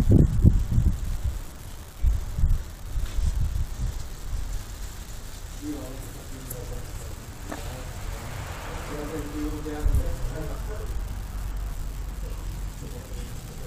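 One data line is marginal, so its bit flips in a random share of samples from start to finish: an unreliable data bit. Every error adds a spike of the same size, about -27 dBFS, giving a steady crackling fizz that persists through pauses.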